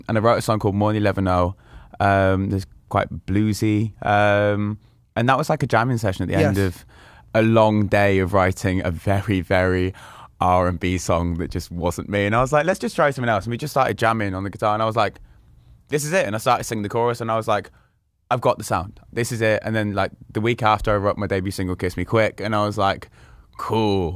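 No technical faults can be heard anywhere in the clip. Nothing breaks into the sound at any point.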